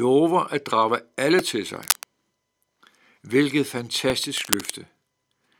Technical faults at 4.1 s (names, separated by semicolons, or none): repeated buffer